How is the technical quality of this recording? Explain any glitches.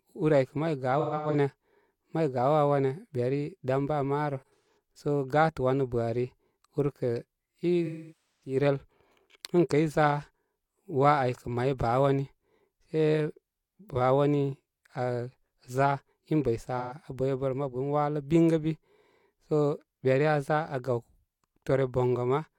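The recording has one recurring fault: AAC frame loss with concealment, at 0.99–1.35 s, 4.37–4.67 s, 7.86–8.57 s and 16.78–16.94 s. Missing frames are replaced from the last good spectrum. The short gaps sound smeared and phasey. The longest, about 0.55 s of lost audio near 8 s, sags toward silence before recovering.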